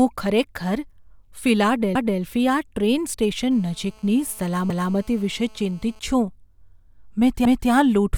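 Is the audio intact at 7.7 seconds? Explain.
No. From 7.45 to 7.70 s the speech shows overlapping chunks: a new 2.5 s chunk begins 250 ms before the previous one ended, so that quarter-second of audio plays twice at the join, heard as a brief stutter ending right around 7.7 s.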